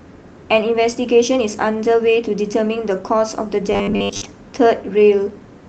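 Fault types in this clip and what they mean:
Clock drift between sender and receiver: the sender's clock runs roughly 4 percent fast, overfilling the receiver's buffer; the waveform shows small, unevenly spaced seams throughout.
Repeated timing corrections: from 0.45 to 5.52 s, short pieces are trimmed to match the 104% speed. The spectrogram shows tiny, irregular vertical breaks, heard as slight hiccups.
Robotic sound from repeated short buffers: from 3.73 to 4.22 s, a metallic 100 Hz buzz, likely from a roughly 10 ms segment looped over most of that stretch, shows as rigid harmonic lines.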